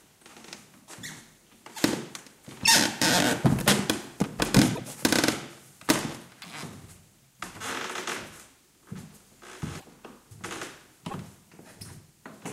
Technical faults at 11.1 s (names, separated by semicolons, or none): broken MP3 bit reservoir